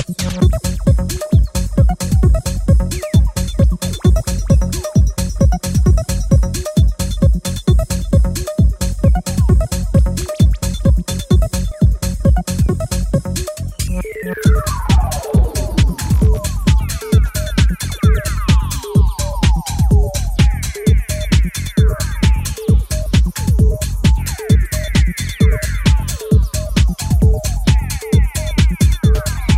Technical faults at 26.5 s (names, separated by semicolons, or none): none